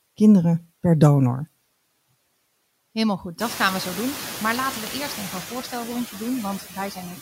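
Noise suppressor artifacts run through the whole clip. The steady background is pulled down by about 17 dB between phrases and swells back under the speech. Around 3.5 s the room noise itself rises by about 19 dB to sit roughly 16 dB below the speech, which makes this pumping easier to hear. From 6.59 to 6.98 s, just after "eerst even een voorstelrondje", there is speech cut by the noise suppressor: it treats parts of the speech as noise and lowers them by up to about 10 dB. Roughly 150 ms of sound comes out swallowed and faint. Unlike the pumping background, here the speech itself drops away.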